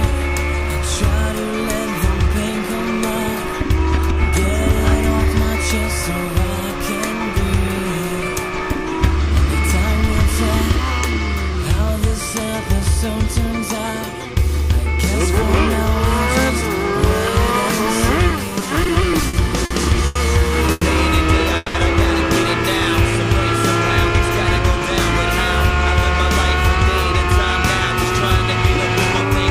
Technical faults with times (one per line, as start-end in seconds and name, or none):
18.29-20.17 repeated stalls (stutter)
20.71-20.84 call audio freeze
21.56-21.76 call audio freeze